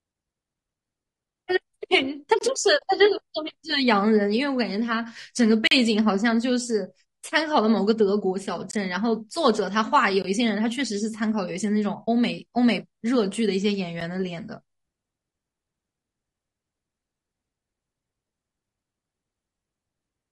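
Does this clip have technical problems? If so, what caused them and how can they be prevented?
Yes. The speech sounds rough and grainy throughout, with noise between harmonics and a dulled top end. This is likely low-delay AAC compression at a rate around 32 kbps. Giving the encoder a higher bitrate would fix it.

There are blocks of digital silence at 2.39–2.41 s, 5.67–5.71 s, 8.71–8.73 s, 10.22–10.24 s and 14.01 s. Each is a hard cut to zero lasting up to 40 ms, which points to the output buffer not getting filled in time. Larger buffers or higher priority for the audio thread would prevent it.

AAC frame loss with muting shows up at 2.78–2.82 s (40 ms, which fits two lost frames) and 12.07–12.08 s (20 ms). These are a soft-edged hole and a brief dip that fade out and back in. Better packet protection, or concealment instead of muting, would help.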